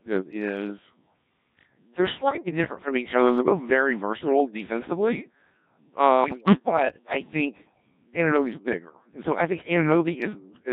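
Throughout, the speech has the heavy robotic buzz of the Codec 2 vocoder, rebuilt from pitch, voicing, energy and envelope alone at a rate that fits about 1.3 kbit/s. Bit errors on digital voice radio hit at 2.29 to 2.51 s, just before "different from each other", and at 6.24 to 6.85 s, just before "I think". Corrupted frame parameters make the pitch, level and timbre jump into warbling bleeps.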